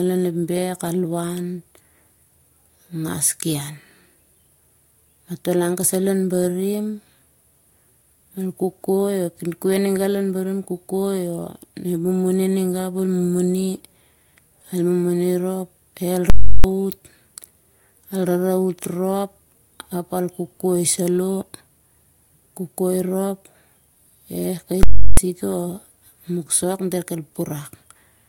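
Speech, interrupted twice by invalid numbers at full scale. At 16.30 to 16.64 s and 24.83 to 25.17 s, a calculation failed and the output pinned to one extreme value. Each event is a loud pop, then silence, then another pop. Each lasts 0.34 s, which fits a 16384-sample block.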